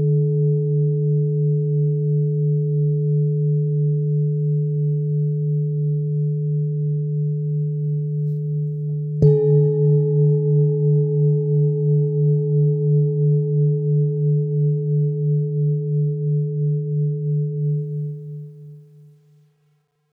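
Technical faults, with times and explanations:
17.78 to 20.12 s, truncation distortion on a fade: as the fade-out that starts around 18 s drops toward the smallest level step without dither, the waveform collapses into coarse square steps, which fits roughly an 11-bit path. It turns gritty, worst from 19.05 to 20.13 s.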